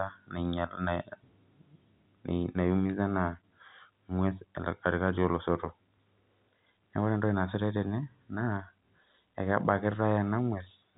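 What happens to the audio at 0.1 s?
Nothing goes wrong at 0.1 s: the speech there is intact, carrying only the narrow telephone band of G.711 A-law coding, with nothing above about 3.9 kHz.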